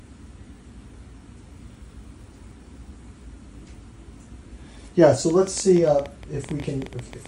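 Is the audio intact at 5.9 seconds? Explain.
No, a train of clicks runs from 5.30 to 7.27 s, likely from interference or a faulty connection injecting pulses about 10.8 times a second. These are heard as irregular popping that stands out above the sound.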